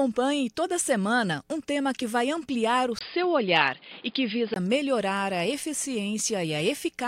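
A speech recording in which, from 2.99 s to 4.56 s, the sound abruptly loses everything above 5 kHz and turns dull and boxy. There is a brief 20 ms gap at the changeover, and a new background noise sits roughly 30 dB under the signal, while loudness stays about the same. The cause is likely an input switched to a poorer device, a narrower-band microphone path with its own noise floor, before the original input returns at 4.56 s.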